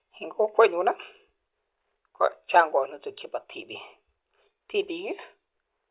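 No technical faults are audible anywhere in this speech.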